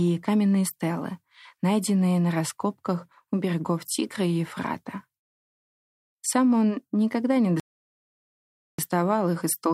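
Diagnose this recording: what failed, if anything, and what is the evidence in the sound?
A rebuffering stall at 7.60 to 8.79 s, a playback-stage failure: right after "он никогда не" the speech drops to silence for about 1.19 s, then picks up exactly where it stopped. The player exhausted its downloaded audio and waited for more, adding time without losing any content.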